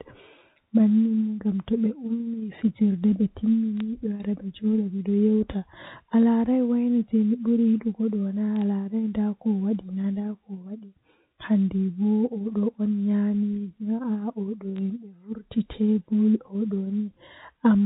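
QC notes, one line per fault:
3.80 s, 8.56–8.62 s, 14.76–14.78 s: bit errors on a digital phone line. A few flipped bits corrupt single G.711 samples over otherwise unchanged speech.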